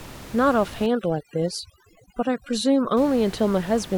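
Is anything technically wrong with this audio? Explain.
Yes, there's overdone noise removal from about 0.86 s to 2.97 s. The denoiser was pushed too hard, so any band sitting near its noise estimate gets slammed shut, taking soft speech detail along. The gaps drop and break up into twinkly specks. Outside that stretch, the room noise sits about 18 dB under the speech.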